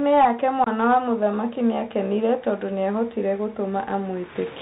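Throughout, the speech carries the Bluetooth CVSD headset codec. Nothing passes above 4 kHz. The adaptive one-bit coding adds granular hiss, scratchy s sounds, and plainly audible distortion on loud highs.

From 0.64 to 0.68 s comes unconcealed Bluetooth headset packet loss. About 22 ms of audio, several short packets, drops to an abrupt hole before "wa mũthamaki nĩakenire tondũ".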